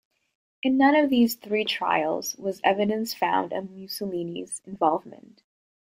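Right at 4.75 s the speech picks up a short burst of DAB burbling, a quick burbling blip sitting on top of the voice. What's going on is weak reception letting bit errors slip past the error correction into the MP2 audio, so a few sub-bands get bogus samples that add blips of noise, or bogus scale factors that make them jump in level. The blip is brief, which fits a handful of damaged frames and an error rate of only a fraction of a percent.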